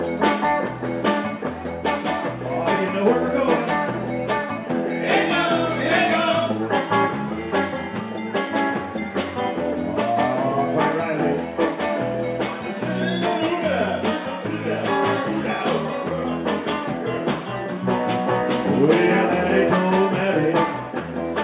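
No technical faults are audible anywhere in this recording.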